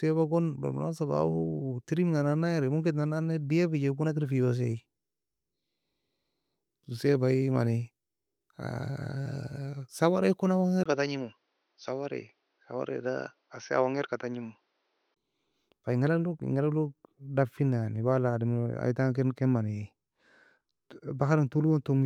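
At 10.84 s there's a 20 ms gap, then the speech turns dull and a bit quieter, with nothing above 6.3 kHz and a faint new hiss well under it. That's likely the input switched to a poorer device, narrower-band microphone, until 15.16 s.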